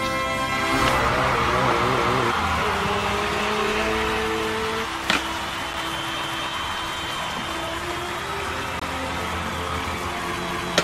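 At 5.73 s the output buffer was likely not filled in time, leaving a block of digital silence of about 5 ms that is heard as a sharp tick. From 6.24 to 6.49 s, overlapping chunks of roughly 4 s each began 250 ms before the previous one ended, so that quarter-second of audio plays twice, like a stutter. A second block of digital silence from 8.80 to 8.82 s, about 21 ms long and consistent with a 1024-sample buffer going unfilled, makes a short hole. The same overlap repeats from 10.51 to 10.76 s, again doubling 250 ms of sound at the join.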